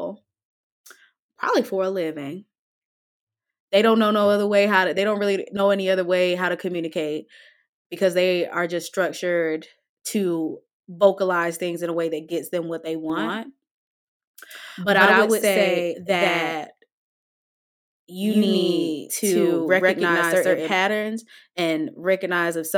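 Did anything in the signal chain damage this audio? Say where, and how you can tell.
Yes. From 13.10 to 20.74 s the speech is a doubled audio track: a second full-band copy, about as loud, trails by roughly 150 ms, likely from a slower second capture path. Unlike echo or reverb, it has no decay or room colour and starts and stops abruptly.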